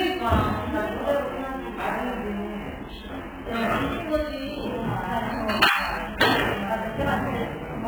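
From start to end, nothing is heard above 4.5 kHz. The sound is dull and smeared, with a warbling, fizzy texture on sustained parts. The likely cause is heavy AAC compression. A very low bitrate, near 8 kbps, would force this cut-off and leave gaps in the spectrum.

Sample clock jitter is also present throughout. The converter's timing wanders by about 10 microseconds, so samples land slightly off. The error is strongest on steep, loud and bright passages, as a rough hiss only about 25 dB below the sound. It disappears in quiet moments.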